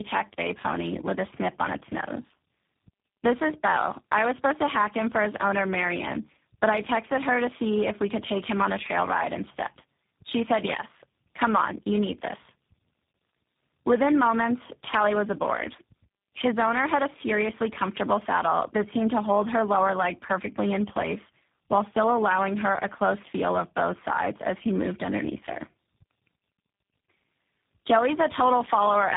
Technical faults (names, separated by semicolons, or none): tandem speech coding